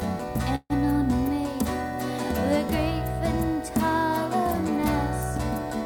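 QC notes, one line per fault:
0.55–0.73 s, call audio freeze: last sound drags into a fading buzz, then 40 ms silence, then resumes intact; likely delayed packets draining the jitter buffer.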